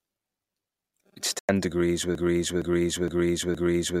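A digital broadcast dropout occurs at 1.39 s and lasts until 1.49 s. The speech drops to silence for about 0.1 s and then returns mid-flow, with the sound from that gap simply gone. This happens when a receiver stops getting valid data, or when incoming frames fail their error check, so it mutes rather than play corrupted audio. The length of this hole fits three lost frames.

A broken-record loop starts at 2.15 s and continues to the end of the clip. The same fragment of speech, about 0.46 s long, repeats exactly and back to back, four times in all, with no variation between passes. The likely cause is a stall in the player, encoder or stream, which kept re-sending the last fragment it held, so whatever should have followed was never heard.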